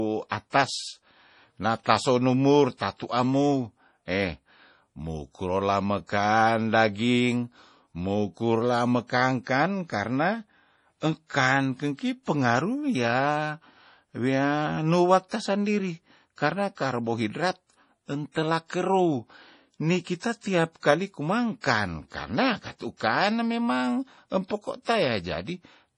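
A speech recording with heavy codec damage throughout. Nothing is present above 10.5 kHz, so the sibilants are dull, and the remaining treble sounds watery and swirly, with chirpy metallic edges on s sounds. This is likely MP3 compression at a low bitrate, around 32 kbps, cutting the top band and dropping weak frequency lines. A spectrogram would show a hard ceiling at 10.5 kHz and patchy, flickering blocks below it. Pre-echo also appears at 0.50, 15.29, 18.32, 21.61, 22.97 and 24.48 s. Each time, a short hiss of about 25 to 34 ms runs ahead of a sharp onset, including just before "tasandiri karna karbohidrat" and "kerou nikita tiap", and just after "kane memang". The codec spread quantisation noise across its whole block, so the quiet moment before the attack filled with noise. On a waveform or spectrogram this shows as a broadband smear just before each attack.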